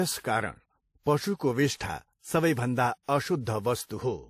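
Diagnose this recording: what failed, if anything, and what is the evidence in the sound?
The codec stage is at fault: the speech carries two layers of compression damage throughout, most likely from transcoding between lossy codecs. Nothing reaches above 15.2 kHz, and swirly, smeared high-frequency detail sits alongside a second, differently textured coarseness. The mix of artefacts points to a low-rate MP3 re-encoded through WMA 1 at around 64 kbit/s, with the second encoder spending bits on the first one's damage. A single low-bitrate encode would show only one artefact character.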